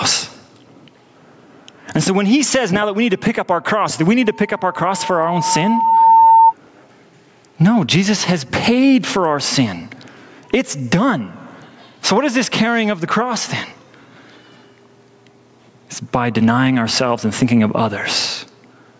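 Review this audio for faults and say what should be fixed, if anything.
Gain pumping runs through the whole recording. The likely cause is input gain set far too high, with a fast limiter clamping each loud syllable. The gain swings by roughly 20 dB, squashing its dynamics. Lower the microphone gain so the limiter rarely acts.

A loudspeaker feedback squeal runs from 4.22 to 6.54 s, starting right after "our cross do we". The microphone picked up its own loudspeaker, and the loop gain exceeded one at 905 Hz. That tone grows over about two seconds until it sits at about the same level as the speech. Use headphones or echo cancellation, or reduce the loudspeaker level.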